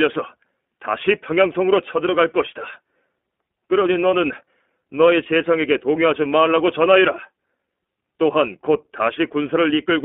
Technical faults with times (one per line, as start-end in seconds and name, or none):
0.00-10.04 iLBC codec
5.24-5.27 lost iLBC frames